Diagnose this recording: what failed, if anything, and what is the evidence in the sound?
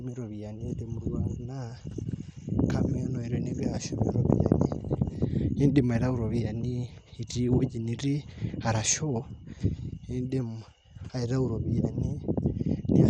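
The codec stage looks like the culprit: it's MP2 compression damage, audible across the whole speech clip. Nothing survives above 15.1 kHz, and the sound is dull and gurgly with that granular grit, which fits a low bitrate around 64 kbps. Layer II's sub-bands likely ran short of bits, dropping and flickering the upper bands.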